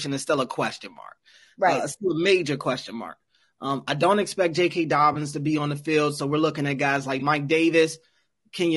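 Throughout the speech there is a rough, grainy texture, with noise filling the gaps between voice harmonics and a thin, synthetic-sounding top band. This is likely low-delay AAC compression, AAC-ELD at a rate that fits about 32 kbps. Its short frames resolve pitch poorly, so unlike steady background hiss, the grain tracks the voice itself.

At 5.13 to 5.16 s, just before "to be on the", and again at 7.19 to 7.22 s, right after "looking at guys like", there is AAC frame loss with concealment. Each gap is about 20 ms, consistent with a single lost frame. The decoder patched it from the preceding spectrum, giving a brief smeared, phasey blur. Unlike a hard dropout, there is no silence.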